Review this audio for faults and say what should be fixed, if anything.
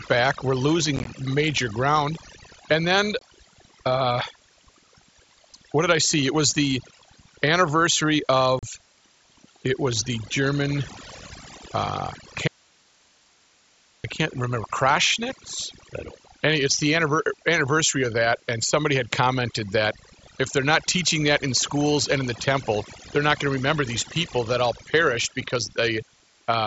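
Overdone noise removal runs through the whole clip. The denoiser is clamping bands near its noise estimate, so the background twinkles. Back the reduction strength off and check it on the quietest syllables.

Unconcealed Bluetooth headset packet loss shows up at 0.96 to 1.07 s, where about 52 ms is lost in short bursts (longest 15 ms), then at 3.19 to 3.22 s and 8.59 to 8.63 s. Each hole has abrupt edges. Keep the headset close to the phone, away from Wi-Fi congestion, and turn on packet loss concealment.

Audio dropout to a faint residue runs from 12.48 to 14.04 s. The speech cuts out abruptly for about 1.6 s, leaving only hiss about 35 dB down. The likely cause is the signal being lost upstream while the later path stayed live. Check the cabling or the wireless link feeding that path so the source can't drop out mid-take.

The mSBC headset codec itself adds only light graininess and needs no change.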